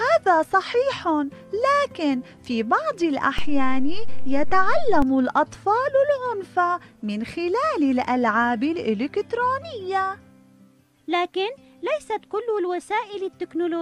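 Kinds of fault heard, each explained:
DC step: The waveform's zero line suddenly shifts away from centre, as happens when a converter recalibrates or an offset input is switched in. Here the offset appears at 3.39 s with a size of about -15 dBFS. It holds until 5.02 s and then drops back. Each jump is heard as a low thump or click. The sound carries on unchanged through the offset period, riding on the displaced baseline.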